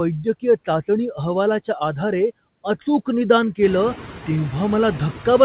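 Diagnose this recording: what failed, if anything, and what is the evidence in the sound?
The failure is in the call processing stage: noise suppressor artifacts run through the whole speech clip. The suppressor pulls down the bands it judges to be steady noise by about 14 dB, frame by frame, so the background drops in the gaps between words and returns underneath them. The effect gets more obvious after the room noise steps up by about 15 dB around three and a half seconds. All of this sits inside a telephone-band signal with nothing above 4 kHz, consistent with a narrowband call codec.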